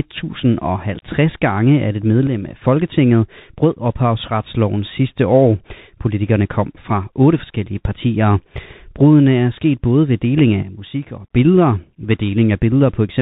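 Throughout, the speech carries Bluetooth CVSD headset codec damage, consistent with a 64 kbit/s headset link where a one-bit delta coder tracks the waveform with an adaptive step size. Nothing above 4 kHz survives, s sounds turn scratchy, loud bright passages distort where the step cannot keep up, and a grainy hiss sits underneath.

At 2.27 s, right after "gange at et", a sudden gain jump drops the level by about 6 dB until 2.61 s, with speech and background noise falling together. After "sket både ved deling", a deeper drop of about 10 dB runs from 10.63 to 11.31 s. Both are likely a digital gain change applied without a ramp.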